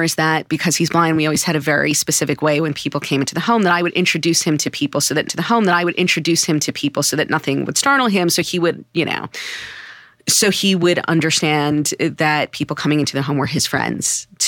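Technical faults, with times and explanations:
5.27 to 7.29 s, stream segment repeated: after "to people so that", about 2.02 s of speech replays with a small blip, because the player fetched or queued that segment twice.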